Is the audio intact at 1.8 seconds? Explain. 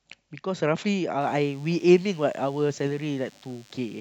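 No: DECT cordless phone buzz runs from 1.21 s onward. Rectified 100 Hz radio bursts give a thin, harmonic-rich buzz about 30 dB under the speech.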